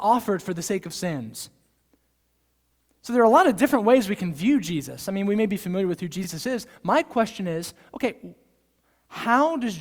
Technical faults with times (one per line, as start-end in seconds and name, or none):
6.24-6.27 overlapping chunks